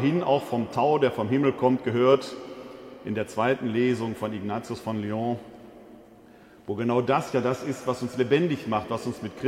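Nothing in the clip stands out as a technical fault; it just runs along without any glitch worth pointing to.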